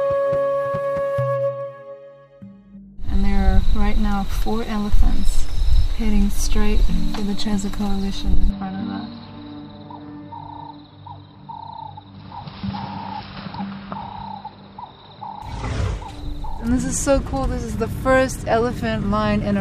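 At 8.50 s the sound abruptly turns duller, losing everything above 5.4 kHz, drops a few decibels and picks up a faint new noise floor, with no gap at the change. This is likely an input switched to a poorer device. Full bandwidth returns at 15.42 s.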